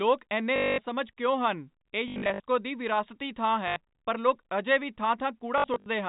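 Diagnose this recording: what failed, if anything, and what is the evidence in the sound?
Network stage: packet loss with last packet repeated. You get robotic stutters at 0.56–0.78 s, 2.08–2.4 s, 3.68–3.76 s and 5.58–5.86 s, where the receiver kept replaying the last packet to fill the gaps. The runs buzz around 50 Hz, which points to 20 ms packets.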